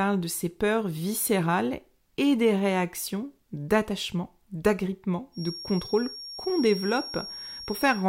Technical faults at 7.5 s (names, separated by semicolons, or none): feedback whistle